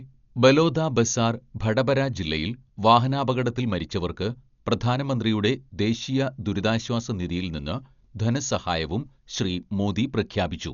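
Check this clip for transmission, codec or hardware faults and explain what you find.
One codec fault runs through the whole clip: heavy damage from what is likely Dolby Digital compression. Nothing is left above about 6.9 kHz, so the speech sounds dull and muffled. The encoder points to a low bitrate, around 48 kbps, and at that rate it cannot spend bits on every frequency line. Many lines are rebuilt at playback as dither noise, which adds a rough, fluttering hiss around the voiced tones throughout.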